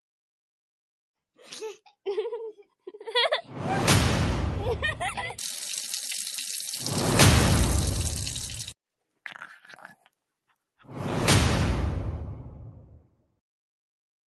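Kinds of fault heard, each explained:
Sound cut by the noise suppressor: from 9.52 to 10.14 s the sound sinks, by up to about 12 dB, for roughly half a second. The suppressor mistook this stretch for background noise and turned it down harder than the audio around it.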